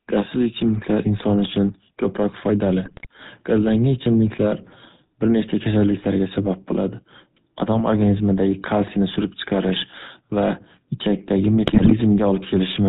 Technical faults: GSM full-rate codec; GSM bit errors

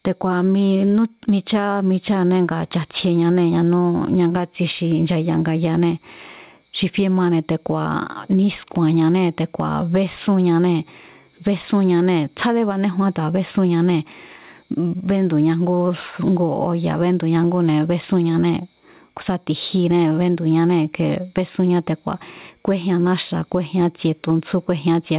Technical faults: gain pumping

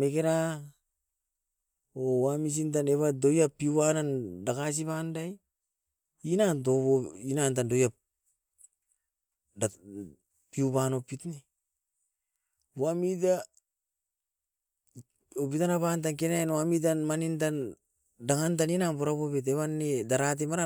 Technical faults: none

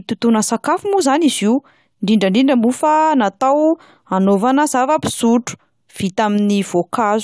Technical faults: none

